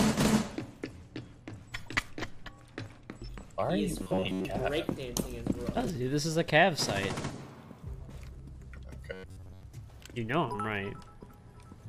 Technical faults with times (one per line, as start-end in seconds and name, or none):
4.02-4.45 robotic sound from repeated short buffers
9.13-9.63 robotic sound from repeated short buffers